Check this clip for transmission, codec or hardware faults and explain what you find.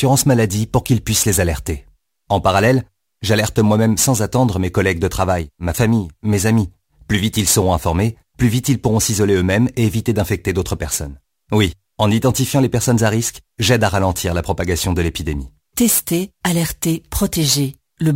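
One fault runs through the whole speech clip: crude rate conversion. A gritty, inharmonic fizz rides on the louder and brighter sounds, roughly 20 dB below the speech. It fits a nearest-sample change from 44.1 kHz to 48 kHz, where periodically repeated samples create unrelated tones.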